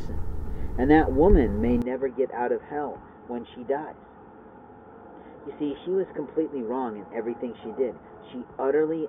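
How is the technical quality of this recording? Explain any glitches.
The recording has one clear problem: from 1.82 s to the end, the sound abruptly loses its top end and drops in level. This is most likely an input switched to a poorer device, with the system changing microphones mid-recording. The new path passes nothing above 3.6 kHz, so everything after the change sounds dull and boxy, arrives roughly 10 dB quieter, and carries a faint new background noise. The switch happens with no gap of silence.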